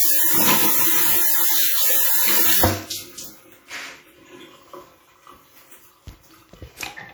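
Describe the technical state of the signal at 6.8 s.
At 6.8 s the sound carries plainly audible transform-codec damage that runs through the whole clip: a ringing, washy smear with hiss that rises and falls with the signal, as quantisation noise spreads over long blocks and weak components drop out. This is likely WMA compression, at a level that fits roughly 48 kbps. Unlike a low-pass or band-limited fault, the top end still reaches about 20.1 kHz. The problem is smearing, not dullness.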